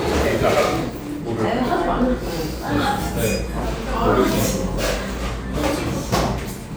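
Nothing stood out on listening to these everyday sounds.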